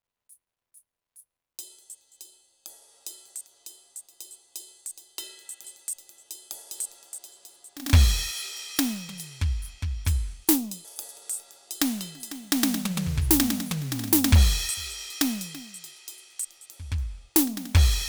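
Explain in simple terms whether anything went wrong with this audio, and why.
Two brief glitches break into the music, at 5.64 s and 10.85 s. These come from damaged data in a compressed stream: part of the file was damaged, so the player misread that spot, lost its place, and searched ahead for the next clean frame.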